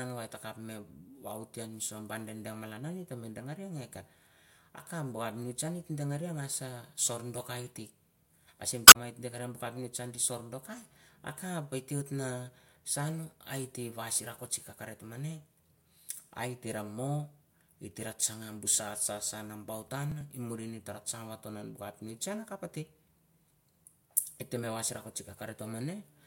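At 8.84 s, right after "ah same", a short glitch cuts across the speech for about 0.12 s, ending at 8.96 s. This is damaged data in a compressed stream: part of the encoded data arrived corrupted, so the decoder misread the frames there, lost its place, and skipped forward until it found the next valid frame header, briefly discarding a sliver of speech.

From 19.88 s to 20.21 s, a gritty burst of crackle tears across the speech for about a third of a second and then stops. This is processor overload crackle. The processor fell behind and missed a handful of audio deadlines in quick succession. Each missed buffer was skipped rather than filled, leaving a tiny hard-edged gap. The buffers were about 5 ms each.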